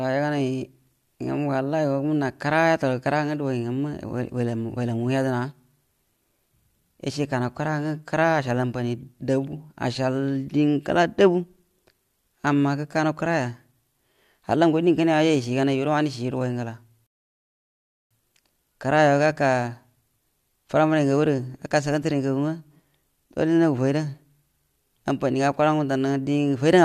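At 17.07 s there's a rebuffering stall: playback starved, going silent for about 1.04 s until 18.11 s, then picking up exactly where the speech left off.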